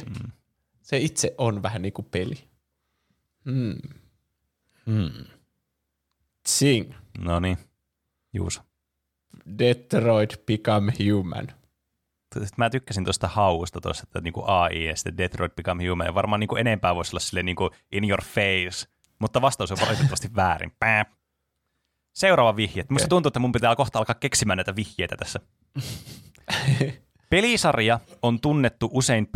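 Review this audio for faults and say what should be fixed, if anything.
Nothing needs fixing; no faults were found.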